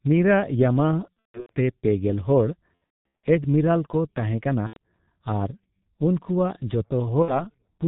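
Throughout, the speech sounds muffled and hoarse with smeared consonants, the mark of the heavily compressed G.723.1 codec at 6.3 kbit/s, which passes nothing above 4 kHz. At 1.14 to 1.52 s, 2.75 to 3.26 s, 4.67 to 4.78 s and 7.22 to 7.42 s, sound stretches into a fading buzzy tone or coloured noise as the codec conceals VoIP packet loss, with gaps of up to 210 ms.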